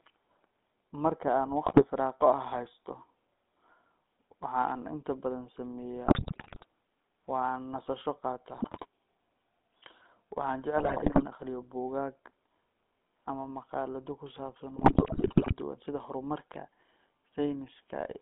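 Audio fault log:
throughout: GSM full-rate codec. The buzzy, gravelly speech fits 13 kbps full-rate coding. The spectrogram shows nothing below 200 Hz or above 3.6 kHz and smeared harmonics.
1.66–1.84 s, 6.06–6.66 s, 8.56–8.86 s (after "nasasho qaato"), 10.78–11.25 s (before "akhriyo buugaag"), 14.76–15.54 s (between "ama maqaalado ku saabsan" and "duwan sida horumarka"): GSM bit errors. Corrupted filter, pitch and gain values produce squawks, pops and gargling. The waveform shows level spikes and the spectrogram shows distorted, blotchy frames.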